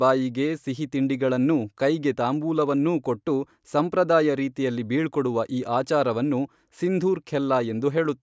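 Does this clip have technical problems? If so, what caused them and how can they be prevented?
No, this speech recording has no technical problems, so there is nothing to trace or prevent.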